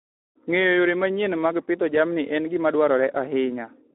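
Throughout, Speex codec damage makes the speech hoarse and noisy, which fits about 11 kbps. The spectrogram holds energy within 300 Hz to 3.5 kHz and is blank above 3.8 kHz.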